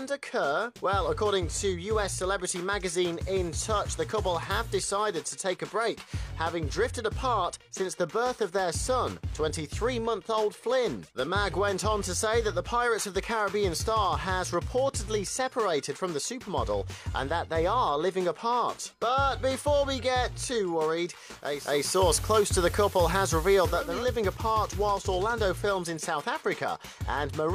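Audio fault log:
21.37–24.09 s, digital radio blending to analogue: a 0.46 s cross-fade to the FM signal brings in hiss and shifts the level about 4 dB, then fades back.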